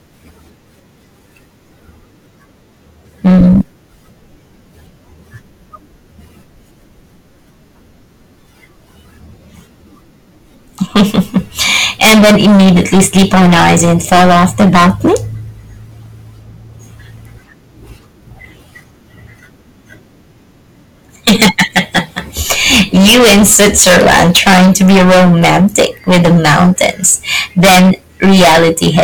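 Hard clipping overloads the speech three times: 3.26 to 3.61 s, about 9 dB over, giving brief crackle on peaks; 10.82 to 15.17 s, about 23 dB over; and 21.27 s to the end, about 26 dB over. Peaks beyond the stage's limit are cut flat, adding high harmonics heard as harsh fuzz.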